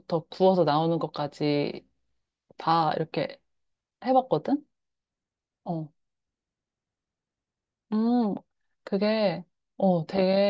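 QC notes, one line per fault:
No technical faults are audible anywhere in the speech signal.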